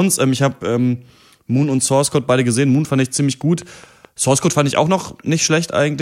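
Something, likely interference from nearby equipment or a faulty connection or power supply, injects a regular pulse into the signal from 3.20 to 4.06 s, producing a train of clicks. They arrive evenly at 4.7 per second, around five in all, each with much the same sharp shape and peaking at roughly the level of the speech itself. The result is a steady ticking laid over the talking, heard in the gaps as well as during the speech.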